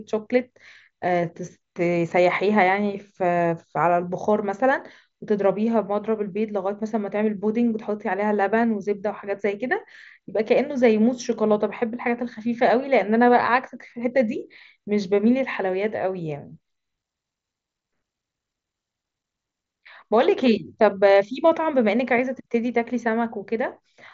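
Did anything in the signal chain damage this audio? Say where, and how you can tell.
No, nothing in the chain has damaged this speech; it just carries the ordinary character of a wideband Bluetooth headset link running mSBC, which is how it was meant to sound.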